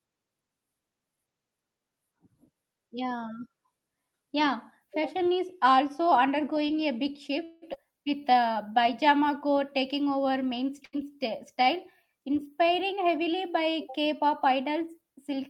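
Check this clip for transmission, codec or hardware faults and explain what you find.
The speech carries five network-related faults, three of them clustered between 7.4 and 8.7 s, all heard through an Opus call path whose top end stops near 12 kHz.

Call audio freeze, 7.43 to 7.64 s: packets were likely held up in transit and the jitter buffer ran dry. The receiver stretched the last sound into a fading buzz or hiss for about 185 ms, then resumed exactly where it stopped, so nothing is lost, only delayed.

Skip ahead, 7.74 to 7.77 s: right after the freeze, later audio was already queued, so roughly a tenth of a second was discarded to catch up. Playback jumps forward with only a tiny bridging fill, joining the two sides almost directly.

Jitter buffer slow-down, 7.91 to 8.67 s: with its reserve low, the receiver repeated single pitch periods many times, adding about 98 ms. The speech runs at 88% speed with unchanged pitch, sounding drawn out.

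Burst of packet loss, 10.85 to 10.95 s: about 80 ms of audio never arrived in time. The receiver extended the preceding sound and faded it over the gap, producing a brief held buzz or hiss before the speech resumes further on, with that stretch missing.

Jitter buffer speed-up, 12.67 to 13.84 s: the buffer held more audio than its target, so short pieces of one or a few pitch periods were removed repeatedly, around 70 ms in all. The speech runs at 106% speed at the same pitch, sounding hurried.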